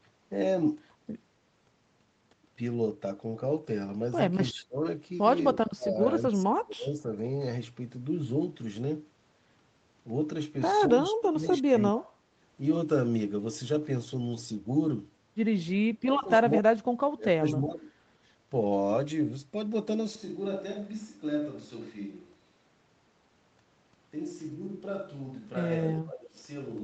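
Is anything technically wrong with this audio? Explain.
Yes, there are two faults.

Speech suppressed in double talk, most likely, at 4.49–4.83, 5.53–5.99, 6.29–7.13, 11.1–12.12, 16.02–16.44, 16.6–16.83, 17.16–17.88 and 25.84–26.38 s. With both sides talking at once, the echo canceller cannot separate this talker from the loudspeaker echo and turns everything down. The speech dips or breaks up, by roughly 15 to 40 dB at its deepest.

Switch to a distant microphone, from 20.15 s to the end. The close microphone's signal has apparently dropped out and a farther one takes over. The sound suddenly turns roomy and hollow, about 10 dB quieter, with less bass and room noise only about 30 dB below the speech.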